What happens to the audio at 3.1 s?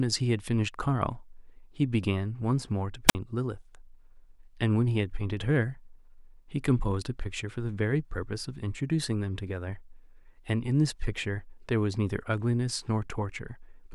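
A wireless microphone squelch dropout occurs from 3.07 to 3.15 s. The radio link from the analogue FM transmitter fades, and once the received signal falls below the receiver's squelch threshold, the receiver mutes its output rather than pass on noise. In the speech, a short rise of hiss or static precedes a hole of near silence lasting about 51 ms. The voice then cuts back in as the signal recovers and the squelch reopens.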